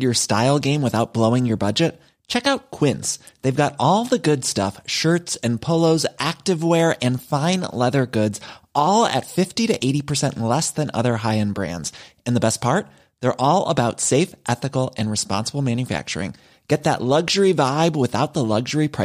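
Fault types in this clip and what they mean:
No fault types are present in this clip, so there are none to explain.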